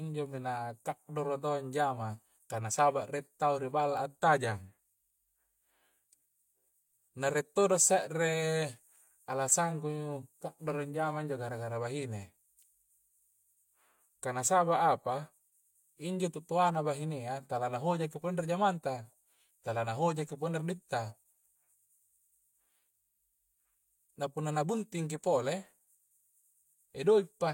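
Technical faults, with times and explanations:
The speech signal stays technically intact throughout, with no disturbance from the recording or transmission chain at any point.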